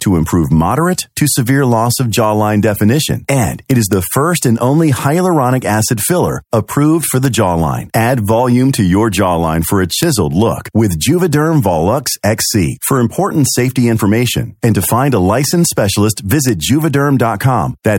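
At 3.71 to 3.93 s the speech breaks into harsh cracking, and single sharp cracks follow at 7.25, 10.03, 12.07 and 16.49 s. This is integer overflow: on loud peaks a sum or gain exceeded the largest representable integer and wrapped around to the opposite sign instead of being limited. Each affected sample jumps across the full range, producing a violent click far sharper than clipping would.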